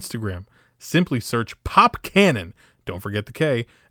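Nothing in the recording stands out as a technical fault; it's just speech with nothing to flag from one moment to the next.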